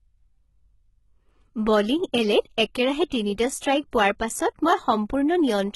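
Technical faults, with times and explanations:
Throughout, HE-AAC compression: the speech has a bright but synthetic-sounding top end that stops dead at about 11.8 kHz, and the s sounds come out gritty and lispy. The likely cause is heavy coding that keeps only the lower band and fakes the treble by copying lower bands upward under a rough envelope. That fits a very low rate, around 16 kbps, so the rebuilt harmonics don't line up with the real ones.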